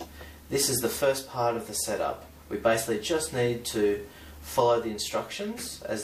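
No technical faults can be heard anywhere in this audio, so there is nothing to describe in time order.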